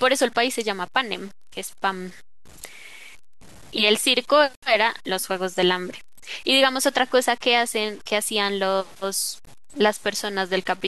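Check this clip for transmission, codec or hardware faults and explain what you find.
One fault runs through the whole clip: low bit depth without dither, present from start to end. The speech has been reduced to very few amplitude steps, with a coarseness that fits roughly 7 bits, and the values were likely cut off rather than rounded, with no dither noise added first. The resulting error sits only around 25 dB below the speech and tracks it, so it is heard as a grainy, rasping distortion that changes with each syllable, worst on the quiet tails.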